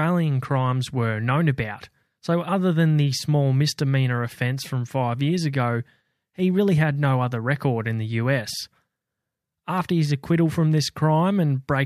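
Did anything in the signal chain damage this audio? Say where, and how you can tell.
No, nothing along the chain from capture to playback has left a mark on this speech recording that a careful listen can pick up.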